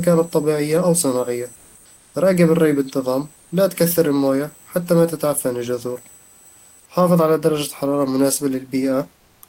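At 1.55, 1.96, 3.36 and 9.16 s, brief pauses get comfort noise in place of the background: smooth, featureless hiss, up to about 6 dB quieter, likely discontinuous transmission during silence.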